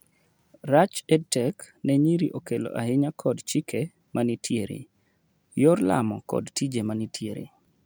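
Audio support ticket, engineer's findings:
Speech recording reviewed; no faults found.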